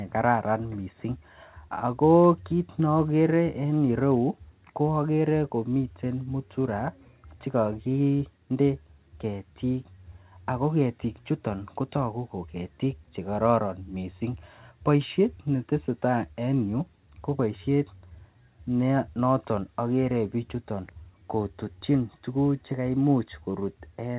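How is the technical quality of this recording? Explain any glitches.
No glitches; the recording has no technical faults.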